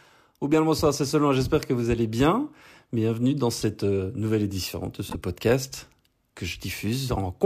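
A corrupt frame decoded at 3.61 s, just before "euh nouvelle édition de", and again from 5.10 to 5.15 s, between "euh nouvelle édition de" and "podcast que". Damaged bits reached the decoder, which played the frames anyway, spraying energy into the wrong frequency bands. Each event is a brief chirp or blip peaking around -20 dBFS. The first is roughly one frame long, and the second, about three times as long, sounds like roughly two frames.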